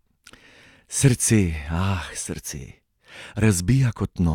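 No audible faults in it.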